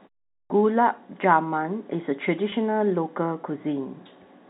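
At 0.43 s, right after a silent stretch of about 0.43 s at the top, there's a clipped start after a pause. The output path seems to have dozed off during the quiet and needed a moment to wake back up, so roughly the first 70 ms of the sound, from 0.43 to 0.5 s, just never makes it out. You hear the speech jump in abruptly, already underway, with its opening chopped off.

Later, from 2.5 to 2.52 s, there's packet loss with pitch repetition. About 20 ms of audio went missing, which fits a single dropped packet, and the receiver filled the hole by looping the last pitch period it had. Because the gap is so short it doesn't fade into silence. Instead you get a brief held, slightly buzzy smear, a tiny sustained tone, before the speech picks up again. It's all inside the narrow telephone band of the G.711 coding, so nothing above 4 kHz is there to begin with.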